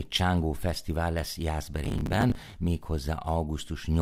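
From 1.85 to 2.54 s the speech carries processor overload crackle. The processor kept missing its deadlines for audio buffers of roughly 10 ms, around thirty of them. Each missed one replayed stale audio with hard edges, and together they make a gritty tearing. On a spectrogram this shows as dense vertical broadband streaks. The waveform shows repeated segments with abrupt jumps between them.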